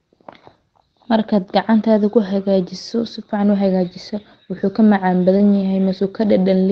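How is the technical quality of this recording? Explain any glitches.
Two brief glitches sit together near the end, heard through a call codec whose audio tops out around 8 kHz, consistent with an Opus call path.

Short concealed packet loss, 5.37 to 5.41 s: a quick smear or wobble. Audio for about 20 ms never arrived, so the receiver extended the preceding sound and blended back.

Lost packet rebuilt from error correction, 5.39 to 5.41 s: a rough, noisier 20 ms patch. The next packet carried a low-quality backup copy of the lost one, which the decoder played instead.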